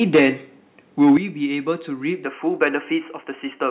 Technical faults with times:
0.01-0.28 microphone overload
0.16 microphone volume stepped down
1.02-1.11 microphone overload
1.17 microphone volume stepped down
3.21 microphone volume stepped down

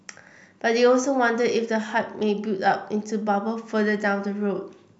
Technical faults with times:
none

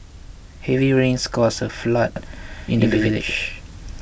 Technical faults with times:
2.16-4.01 doubled audio track

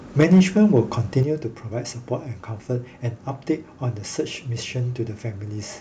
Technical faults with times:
0.20-0.41 microphone overload
0.23 microphone volume stepped down
0.76-0.81 microphone overload
1.23 microphone volume stepped down

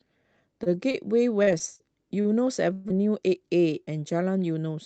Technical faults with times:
0.63-2.93 repeated packet loss (robotic sound)
2.92-3.37 jitter buffer speed-up
3.85-3.90 short concealed packet loss

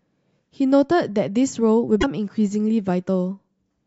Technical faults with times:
1.97-2.04 damaged data in a compressed stream

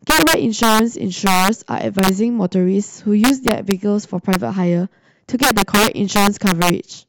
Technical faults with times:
0.10-0.79 integer overflow
1.27-1.48 integer overflow
1.99-2.09 integer overflow
3.24-3.71 integer overflow
4.33-4.35 integer overflow
5.43-6.70 integer overflow

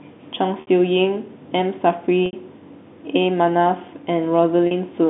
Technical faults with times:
0.61-0.67 packet loss with pitch repetition
2.26-2.33 packet loss with pitch repetition
4.67-4.71 packet loss with pitch repetition

